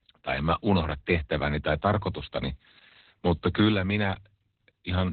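The speech in this clip has passed through Opus voice compression at a very low rate for its whole length, with the SILK coder working in narrowband mode, so nothing above about 4 kHz survives and the excitation is coded very coarsely. The damage is heavy and points to a bitrate around 8 kbps: the voice sounds muffled and boxy, with a hoarse, slightly robotic buzz where the fine detail of the sound should be.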